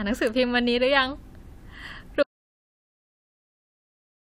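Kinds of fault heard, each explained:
Audio dropout to silence: The speech cuts off abruptly at 2.23 s and never comes back. From there to the end the signal is silent, with no room tone at all. The input was likely lost while recording continued, so whatever followed is gone.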